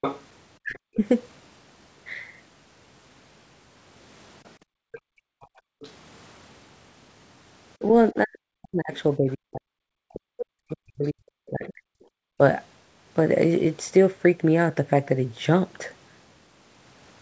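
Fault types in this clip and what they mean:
Other side's voice leaking through: a second voice sits under the speech right at the start, again from 4.45 to 5.92 s and from 7.79 to 12.04 s, well below the main talker. This is likely the far end playing on a loudspeaker and slipping past the echo canceller.
Speech suppressed in double talk: the talker's voice dips sharply, by around 40 dB at its deepest, between 0.59 and 1.0 s and through much of 8.12 to 12.4 s while the far side is playing on the loudspeaker. It's likely the canceller ducking everything when both sides talk at once.
Background gated by the echo canceller: the room sound gets clamped down, by about 40 dB at its deepest, for around a second between 4.58 and 5.8 s and again briefly from 12.14 to 12.38 s. It comes back once the canceller releases the microphone.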